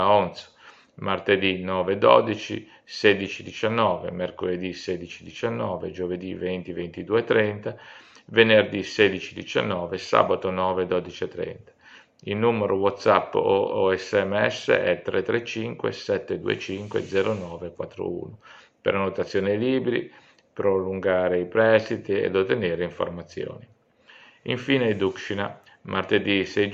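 No technical faults are audible anywhere in the clip.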